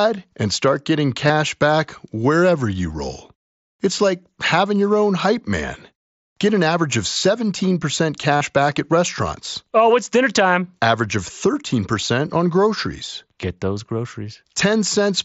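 Voice packets from the headset were dropped twice, at 1.27 to 1.30 s and at 8.37 to 8.41 s, and the receiver filled each gap by repeating recent waveform. This concealed Bluetooth headset packet loss leaves a short buzzy, held tone with a slight warble as real speech resumes, within mSBC's 8 kHz band.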